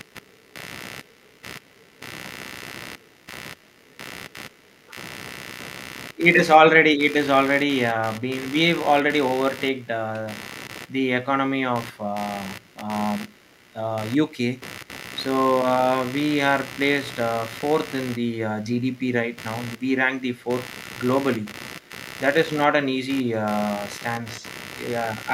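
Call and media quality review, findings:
Computer activity noise, throughout: buzzing pulses near 70 Hz, roughly 15 dB under the speech. Processor or graphics load shifting the shared audio ground.

Echo leak at 2.99–3.12, 6.14–6.18, 12.61–13.54, 14.3–14.88, 18.6–19.81 and 21.42–21.91 s: faint copy trailing by 124 ms, about 40 dB down (about 35 dB at 21.4 s). Likely far-end loudspeaker pickup the echo canceller didn't fully remove.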